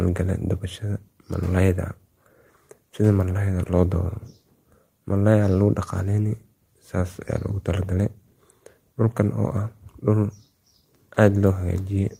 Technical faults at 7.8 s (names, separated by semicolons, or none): none